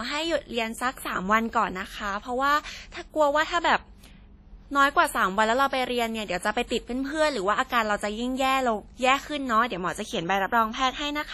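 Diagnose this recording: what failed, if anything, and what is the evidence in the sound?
The whole speech track has a ringing, washy quality with hiss that swells and fades along with the talker, and there's nothing at all above 14.7 kHz. That points to the codec stage, most likely heavy WMA compression at a low bitrate, something like 32 kbps. The long transform blocks smear quantisation noise across tens of milliseconds, and at that rate the weaker spectral lines simply get zeroed, which is why it sounds ringing and washy.

There's also a pre-echo from 6.67 to 6.71 s, a brief hiss that arrives ahead of a sharp attack and spreads over about 32 ms. The transform codec sets its noise level for the loud part of the block and spreads it evenly across the whole block, including the quiet gap just before the attack. That puts a little hissy lead-in in front of the onset and leaves the attack itself soft.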